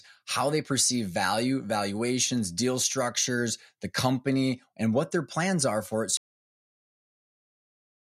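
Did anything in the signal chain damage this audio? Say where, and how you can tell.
Yes. The recording suffers a cut-off end, a storage or playback failure in which the final buffers of speech were never written out. At 6.17 s the speech stops mid-sound and falls straight to digital silence, with no natural decay or room tail, and nothing returns through to the end of the file. That abrupt drop is the giveaway: a speaker finishing naturally would trail off, whereas here the last block of audio was simply lost and the remaining time holds silence.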